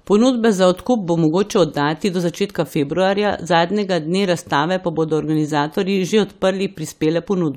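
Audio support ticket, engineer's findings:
Findings: no audible fault found in the speech recording; no symptom to attribute to any component.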